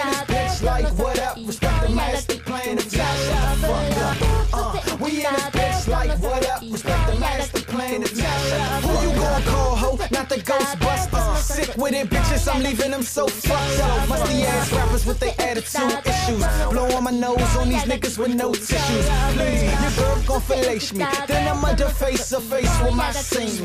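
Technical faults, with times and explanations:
No technical faults can be heard anywhere in the clip. Nothing in the audio calls for a time or an explanation.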